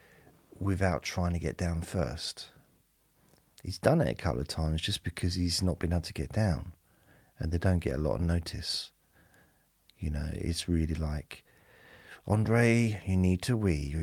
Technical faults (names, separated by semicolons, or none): none